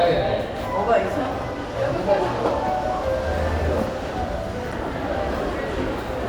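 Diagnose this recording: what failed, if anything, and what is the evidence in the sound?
Damaged data in a compressed stream, at 4.72 s, is a codec-stage failure that originated in the stored or transmitted file. The evidence is a very brief blip lasting only a few milliseconds that breaks the sound. Some bytes in the compressed data were lost, zeroed or overwritten, so the decoder misread or rejected the affected frame, lost synchronisation, and had to hunt for the next valid frame header before normal decoding could resume.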